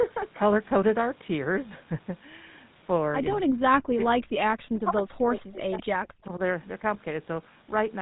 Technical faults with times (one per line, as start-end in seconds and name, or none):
0.00-8.02 GSM full-rate codec
3.59-6.42 speech suppressed in double talk
6.26-6.30 echo leak